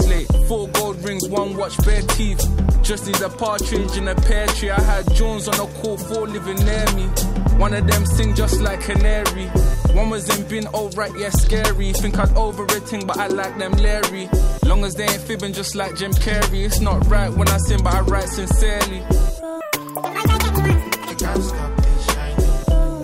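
From 19.61 s to 21.11 s the audio is read two samples at a time, so it plays at double speed. For about one and a half seconds everything rushes past twice as fast and sits a full octave, 12 semitones, higher. The reader has treated each pair of samples as a single frame, as if there were two channels or wider samples.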